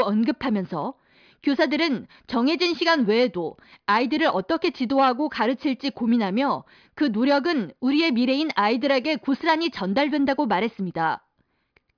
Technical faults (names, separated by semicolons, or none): none